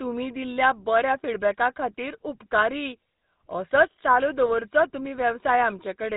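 GSM full-rate codec damage runs through the whole of this speech clip and is plainly audible. The sound is buzzy and gravelly with nothing above 4 kHz, as the vocal-tract model is driven by a sparse, regularly spaced pulse excitation, which fits GSM full rate at 13 kbps.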